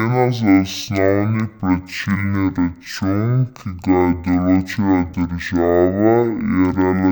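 Stereo read as mono runs through the whole clip: the interleaved left and right samples are taken as one channel, so each pair becomes two consecutive samples. The speech plays at half speed, an octave low, with a fainter mirrored copy in the upper spectrum.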